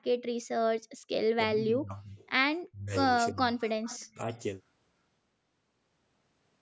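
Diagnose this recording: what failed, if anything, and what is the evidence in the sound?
The talker's level gets pulled down hard from 1.45 to 2.19 s, 2.68 to 2.94 s, 3.32 to 3.59 s and briefly at 4.14 s, by as much as 40 dB. That's in the call processing and is most likely speech suppressed in double talk: the echo canceller can't untangle the talker from the far end, so it ducks everything.

Between 3.59 and 4.13 s there's a faint delayed copy of the voice, about 20 dB down and trailing by 334 ms. It's an echo leak, probably from a speakerphone whose echo canceller let some of the loudspeaker sound back into the microphone.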